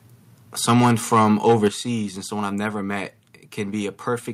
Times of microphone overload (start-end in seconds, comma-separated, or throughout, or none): 0.68-1.67